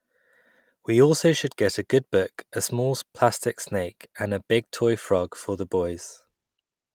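No technical faults are audible.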